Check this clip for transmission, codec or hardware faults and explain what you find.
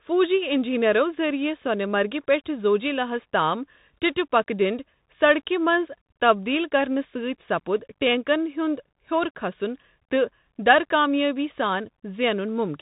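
One codec fault runs through the whole recording. Bluetooth CVSD headset codec, throughout: each sample is a single up-or-down bit, with a step size that adapts, which fits a 64 kbps link. Nothing above 4 kHz survives. Loud high sounds outrun the step and distort, s sounds turn scratchy, and a granular hiss sits under the speech.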